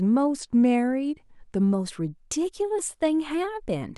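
A drift correction step runs from 0.39 to 1.61 s: the speech slows by about 5.8% and drops 104 cents, roughly a semitone flat, then snaps back. The likely cause is clock-matching software abruptly lowering the playback rate to rebalance its buffer.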